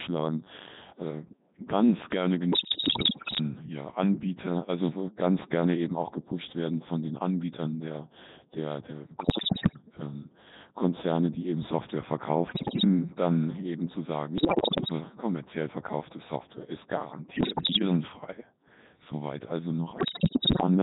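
From start to finish the speech runs through the Codec 2 vocoder at 3.2 kbit/s, and the damage is heavy. Only pitch, voicing, energy and a spectral envelope are carried, and the decoder rebuilds the voice from sine waves, so the result sounds robotic and buzzy. On a spectrogram the harmonics look like evenly spaced synthetic lines under a smoothed envelope. The waveform does not follow the original shape.

Bit errors on digital voice radio then hit six stretches. The first runs from 2.52 to 3.41 s, right after "äh ganz gerne", with roughly one bit in five flipped. The next four each have about one bit in ten flipped: 9.20 to 9.82 s, 12.48 to 12.84 s just before "dann eben zu sagen", 14.38 to 14.92 s between "dann eben zu sagen" and "kommerziell verkaufte", and 17.36 to 17.82 s. The last runs from 19.98 to 20.67 s, again at roughly one bit in five. Because each corrupted bit resets a frame's pitch, level, voicing or spectrum, the voice breaks into bleeps, warbles and robotic gibberish. 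On a spectrogram the harmonic lines jump abruptly from frame to frame, and in the waveform the level steps up and down.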